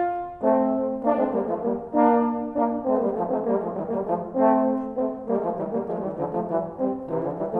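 Nothing technically wrong turns up anywhere in this audio, so there's no fault to point to here.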